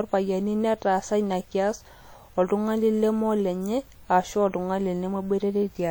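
WMA compression runs through the whole clip, from start to finish. The speech carries plainly audible transform-codec damage: a ringing, washy quality with a hiss that swells and fades along with the voice. This is likely Windows Media Audio encoding at a low rate, with the damage fitting a bitrate around 48 kbps. Long transform blocks smear quantisation noise across tens of milliseconds, and quieter spectral detail is dropped, while the band still extends up to about 20.1 kHz.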